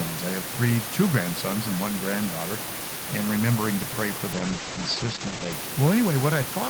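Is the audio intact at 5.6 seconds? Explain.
No, a call bitrate drop runs from 4.38 to 5.65 s, just after "remembering to pray for." Its muffled, coarse sound suggests the encoder fell from about 32 to about 10 kbps, and the audio band narrows from 20 kHz to 8 kHz, dulling high frequencies until recovery.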